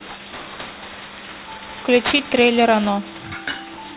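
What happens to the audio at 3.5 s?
At 3.5 s the speech carries aliasing, which runs through the whole clip. The sound points to a rate change from 16 kHz down to 8 kHz without an anti-alias filter, so content above 4 kHz folds back below it, landing roughly 10 dB under the speech. Sibilants turn gritty and metallic, and energy piles right up to the 4 kHz edge. That distinguishes it from simple band-limiting, which would sound dull and clean rather than harsh.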